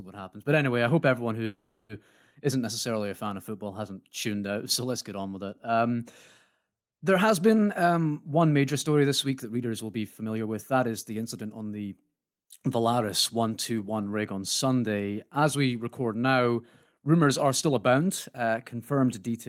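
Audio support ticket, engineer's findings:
Call audio freeze, 1.45 to 1.92 s: about 440 ms of the last sound stretched into a fading buzz or hiss, then speech resumes where it left off with nothing lost. Likely cause: delayed packets draining the jitter buffer. Unlike packet loss, it inserts a gap rather than dropping audio.

Jitter buffer speed-up, 9.26 to 11.58 s (109% speed) and 16.04 to 19.08 s (108%): speech hurried with pitch unchanged. Receiver trims short pitch-period pieces repeatedly to shed excess buffered delay, roughly a fifth of a second per stretch. Unlike a clock or resampling error, pitch stays put.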